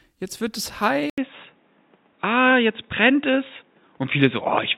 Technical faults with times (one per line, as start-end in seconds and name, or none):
1.10-4.78 input switched to a poorer device